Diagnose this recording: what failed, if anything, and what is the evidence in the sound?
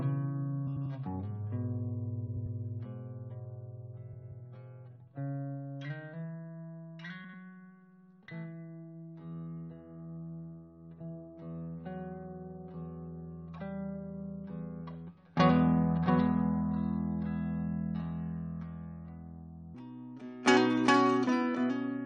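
Frames out of order at 0.67–0.86, 2.27–2.46, 4.13–4.32 and 7.24–7.34 s: garbled flutter, likely a network reordering. Unlike dropouts, no time goes missing.

A section at the wrong speed from 19.75 s to the end: everything runs 1.51 times fast, about seven semitones higher, likely a playback clock mismatch. Tempo rises with pitch, ruling out a pitch shifter.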